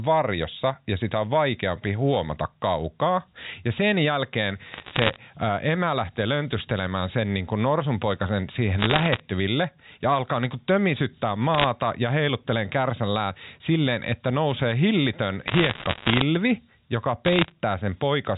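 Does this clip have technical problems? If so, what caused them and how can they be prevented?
Yes. Bit errors on a digital phone line cause crackle at 4.74 to 5.16, 8.79 to 9.20, 11.54 to 11.66, 15.48 to 16.22 and 17.26 to 17.52 s. Flipped bits in the G.711 stream each corrupt one sample, at roughly 0.7 to 1.5 bits in a hundred. A cleaner or error-protected digital link prevents them.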